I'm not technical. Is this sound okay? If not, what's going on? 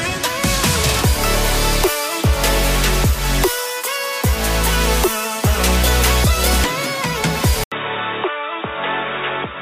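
No. At 7.64 seconds there's a brief gap of about 80 milliseconds, then the sound turns dull, boxy and slightly quieter until the end, with nothing above 3.8 kHz and a faint new background noise. This is likely the input switched to a poorer device.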